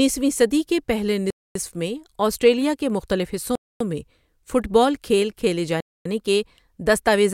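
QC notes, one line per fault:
1.30–1.55 s, 3.55–3.80 s and 5.80–6.05 s, gap between chunks: after "صدی کے پہلے", after "آسٹریلیا کے مختلف حصوں" and after "کھیل کھیلے", the speech stops dead for 250 ms, then resumes exactly where it left off. The holes recur every 2 s of audio, marking the joins between 2 s chunks where silence was inserted. Unlike a dropout, no speech is missing. The flow is delayed, not cut.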